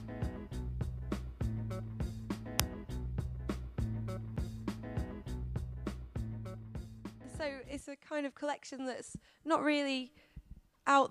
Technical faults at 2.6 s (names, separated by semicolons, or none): uninitialised buffer